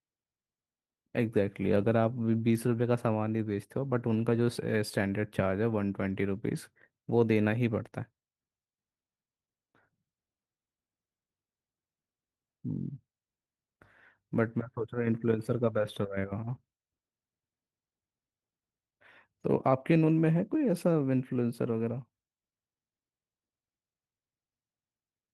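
No faults on this speech clip; the light Opus coding, consistent with a fullband hybrid mode, leaves nothing to flag.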